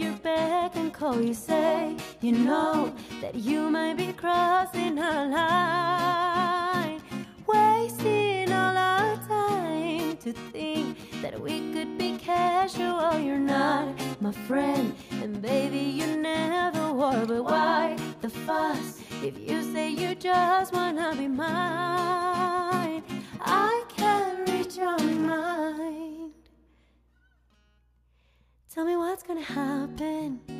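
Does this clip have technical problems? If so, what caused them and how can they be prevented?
No, there are no technical problems to report here.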